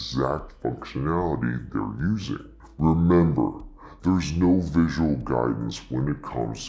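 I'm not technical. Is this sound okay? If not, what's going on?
No. The whole clip is played back at the wrong sample rate. It runs at two-thirds speed and about seven semitones lower, which fits 24 kHz audio played at 16 kHz.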